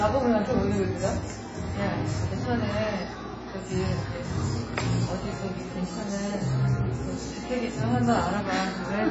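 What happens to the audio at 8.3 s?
At 8.3 s the audio carries the same damage it has from start to finish: nothing above 7.7 kHz, with a dull, smeared top and a warbling, fizzy texture. This is likely AAC compression. A heavily starved AAC-LC encoder, at a rate pointing to about 16 kbps, drops whole bands and patches others with substitute noise. A plain low-pass filter would cut the top just as cleanly but leave no swirling or fizz below the cut-off.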